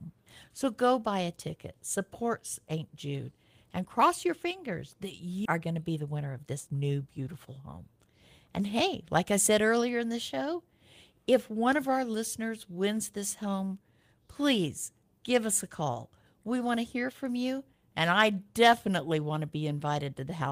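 At 5.45 s, right after "cross your fingers that", the audio makes a skip ahead. Roughly 0.7 s of speech is discarded and the two sides are spliced straight together, with no silence or concealment fill. That missing gap is what sets it apart from a dropout.

From 5.59 to 6.99 s, leading into "beautiful home", a jitter buffer speed-up follows as the receiver sheds excess queued delay. Short pitch-period slices totalling about a fifth of a second are cut, so speech runs at 113% and sounds rushed. Pitch stays unchanged, unlike a resampling error.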